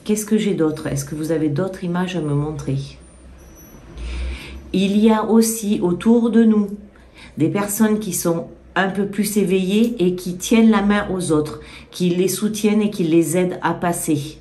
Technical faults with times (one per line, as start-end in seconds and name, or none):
none